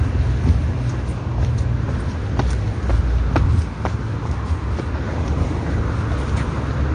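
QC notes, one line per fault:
Throughout: AAC compression. Dull, smeared audio with a fizzy warble points to a lowered cut-off and spectral holes, likely from AAC-LC coding at about 32 kbps.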